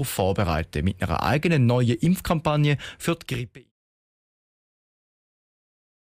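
Overlap between stream segments at 2.05 s: the 2-second segments' time stamps overlapped, so about 13 ms of speech was cut away, and the waveform jumps, heard as a tiny skip. This comes well before the smooth fade-out from about 3 s to 3.72 s.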